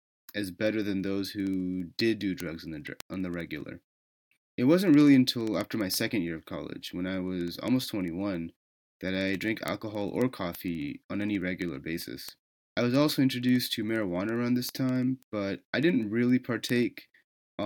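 From 0.13 s right through to 17.63 s, the speech carries word clock ticks: sharp clicks at a steady rate of roughly one every 70 ms, a few hundred in all. The receiving device is running on its own clock rather than locking to the sender's, so every time the two clocks slip past each other a sample gets dropped or doubled. A rate that fast points to the clocks being off by something like a few hundred ppm.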